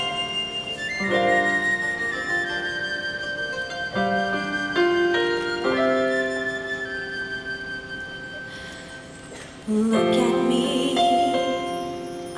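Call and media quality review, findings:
No audible faults found.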